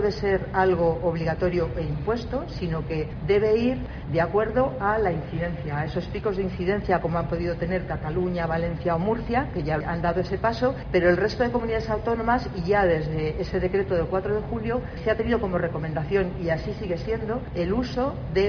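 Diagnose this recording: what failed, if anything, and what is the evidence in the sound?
Nothing failed: no stage of the chain, from analogue wiring through conversion, buffering, processing, transport, storage and playback, leaves any audible mark on this recording.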